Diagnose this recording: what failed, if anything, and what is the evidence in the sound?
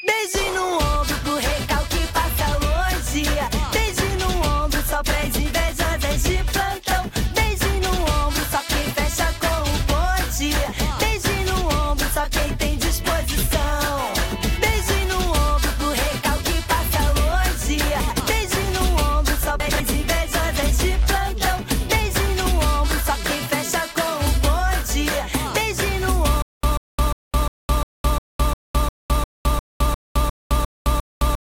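Chunks out of order at 18.0–18.2 s and again at 19.6–19.8 s. In each, a 100 ms block plays one chunk late, after the block that should follow it, so the sound jumps forward and back with no loss. The fault lies at the buffer or stream-reassembly stage. On a waveform, three hard joins appear within each 0.2 s span. A spectrogram shows the content abruptly shifting at those joins.

Stutter with silent gaps runs from 26.42 s to the end. A fragment of about 0.14 s repeats 14 times on a steady 352 ms cycle, with roughly 213 ms of digital silence after each burst. The likely cause is a playback or stream stall that replays the last buffered piece at every retry and then runs empty. The waveform shows identical blocks separated by flat silent stretches. The spectrogram repeats the same pattern, with black gaps between.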